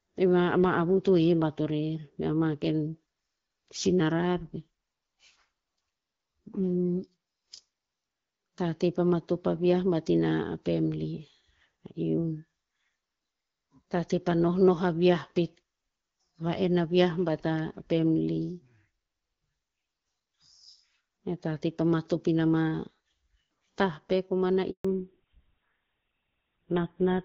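At 24.71 s a handover gap occurs: the call switched networks and no speech frames arrived, so the sound cuts off abruptly and stays silent for 140 ms, until 24.85 s. From 24.85 s to the end, a fallback to narrowband takes over. The codec dropped from the light-sounding HD Voice path, which fits AMR-WB at 12.65 kbit/s, to one that fits GSM full rate, so nothing above 4 kHz survives and the speech turns muffled and rougher.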